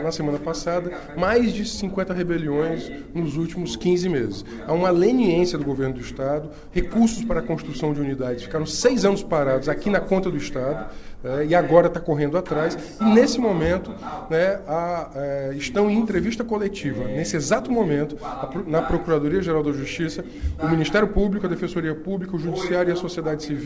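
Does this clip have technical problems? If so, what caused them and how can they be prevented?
No, there are no technical faults in this clip; the call path behaves as expected, with nothing above 8 kHz, which fits a wideband call codec such as G.722 at 64 kbps.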